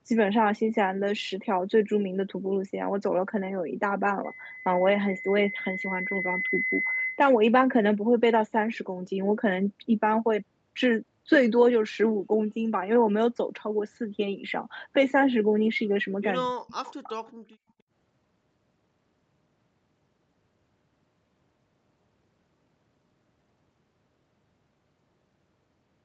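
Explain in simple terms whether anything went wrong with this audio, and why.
Three things go wrong in this speech. From 4.24 to 7.28 s there is a loudspeaker feedback squeal: a single 2 kHz tone swells over about two seconds, where a steady hum would stay constant.

From 16.44 to 16.75 s the voice almost vanishes for about a third of a second. This is most likely speech suppressed in double talk, where it sinks deeply rather than simply stopping as in a clean dropout.

From 16.84 to 17.32 s a faint copy of the voice returns about a quarter second late. This is likely an echo leak, heard as a separate repeat, not the smooth tail of room reverberation.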